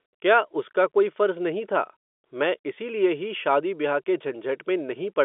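No faults can be heard in this speech.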